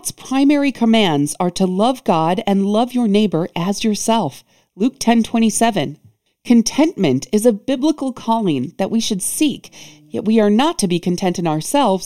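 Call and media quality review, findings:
Channel delay (comb filtering), whole clip: hollow, phasey tone. One channel lags the other by roughly 0.3 ms and the pair is summed to mono. Shared content cancels at evenly spaced frequencies. Probable component: stereo capture or downmix stage. Spectrogram: fixed dark notch bands, the first around 1.5 kHz and repeating about every 3 kHz, constant for the full duration.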